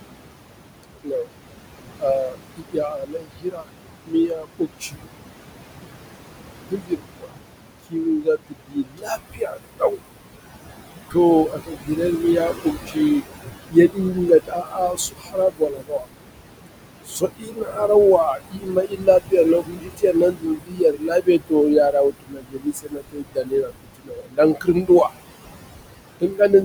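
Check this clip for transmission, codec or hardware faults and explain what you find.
The faults come from noise suppression rather than from transmission, the codec or hardware. Two related problems run through the clip.

Noise suppressor artifacts are present throughout. The suppressor pushes the room noise, about 8 dB below the speech, down by about 21 dB frame by frame. The background sinks between the words and rises under them, whereas steady hiss would stay even.

Speech cut by the noise suppressor happens at 0.83–1.27, 1.99–5.0, 6.69–10.01, 11.1–16.07, 17.05–25.13 and 26.2–26.51 s. In these spans the suppressor mistakes quieter parts of the speech for noise and turns them down by about 17 to 22 dB, so those parts sound swallowed or faint.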